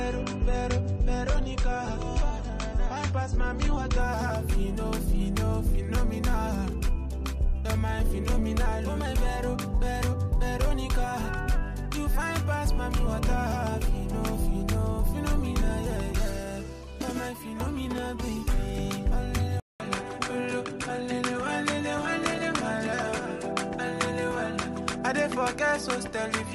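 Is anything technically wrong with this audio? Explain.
Yes, three faults.

From 0 to 4.0 s, an adaptive stream starting at a low bitrate: nothing above 8.3 kHz, fitting about 32 kbit/s MP3, then a gapless jump to fuller treble, consistent with 128 kbit/s.

From 17.98 to 18.00 s, a single loud pop, likely a voltage pulse, peaking a few decibels above the audio. Unlike a dropout, the sound carries on underneath it.

From 19.6 s to the end, the input likely switched to a poorer device: a 200 ms silence, then the band stops at 11.4 kHz with faint new background noise at a similar level. Unlike the bitrate change, the quality drops, and there is a gap.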